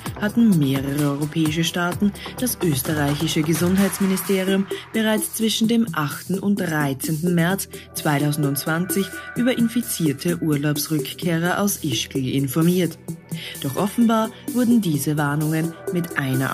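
Nothing technical stands out here; the audio comes through steady and even, with no faults to point to anywhere along the way.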